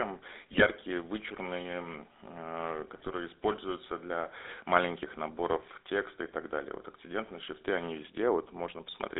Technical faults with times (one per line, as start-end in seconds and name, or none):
0.00-9.20 GSM full-rate codec
0.52-0.66 GSM bit errors
2.96-3.08 GSM bit errors